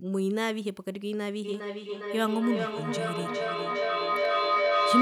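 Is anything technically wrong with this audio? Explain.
Yes. From 1.44 s to the end there is feedback echo between two devices: speech returns roughly every 0.4 s, thinner and ringing, and peaks about 3 dB above the direct speech. One device replays the other's microphone, which recaptures it; neither echo canceller removes it, so the repeats build instead of decaying.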